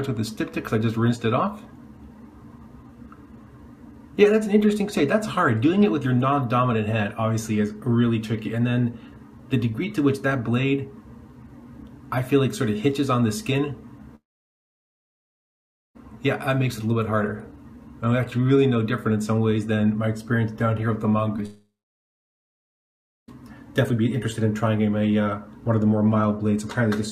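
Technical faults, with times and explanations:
14.15–15.97 s, long network dropout: sound stops, a brief fading fill gives way to about 1.75 s of silence, likely because roughly 1.8 s of audio never arrived.
21.37–21.40 s, short concealed packet loss: a brief smear where 20 ms went missing; the receiver continued the preceding sound, then blended back into real audio.
21.46–23.30 s, long network dropout: a short decaying continuation, then about 1.6 s of silence before the sound resumes further on, likely from roughly 1.8 s of lost audio.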